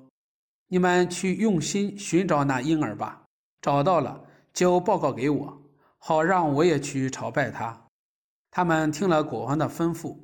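No technical faults can be heard in this audio.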